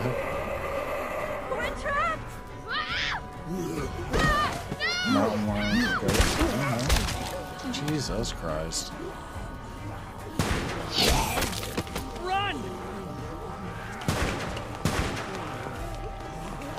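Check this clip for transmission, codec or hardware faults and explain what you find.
No transmission, codec or hardware faults can be heard anywhere in the clip, with the signal arriving continuous and intact throughout.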